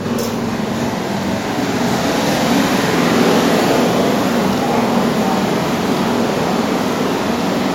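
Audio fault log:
Throughout, channel delay (doubling): one channel trails the other by about 46 ms, which fits a 2048-sample buffer offset, and when the two are folded to mono the late copy stays distinct, so every onset is followed by an equal-level slap that makes the sound seem doubled. On the waveform each transient appears twice, 46 ms apart and at matching height; on the spectrogram each onset shows a twin vertical edge, with fine comb-filter notching across steady content.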